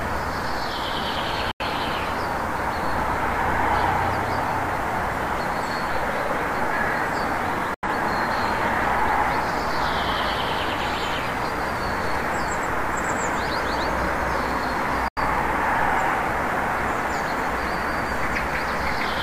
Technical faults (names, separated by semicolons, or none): digital broadcast dropout